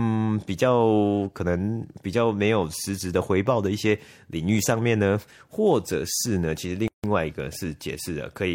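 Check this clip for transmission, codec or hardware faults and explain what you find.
One fault turns up in the speech. From 6.88 to 7.04 s, a 159 ms silence abruptly cuts into continuous speech, which then resumes where it stopped: a gap at a join of encoded pieces, where separately encoded segments were spliced without trimming encoder delay and padding.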